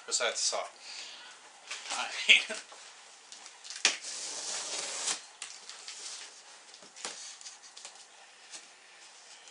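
No technical faults can be heard anywhere in the audio; the signal stays continuous and steady throughout.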